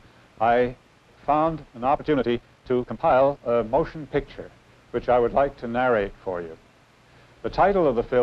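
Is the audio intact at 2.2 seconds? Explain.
No, a time-stretched section runs from 1.93 to 3.55 s, playing about 1.88 times faster while pitch holds steady. Software likely squeezed this stretch by dropping short slices, so the sound turns rushed, with an abrupt change of pace.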